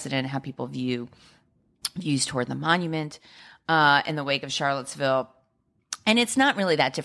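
Nothing in the speech recording stands out as a technical fault: the signal level, continuity and frequency content stay steady across the whole clip without any audible disturbance.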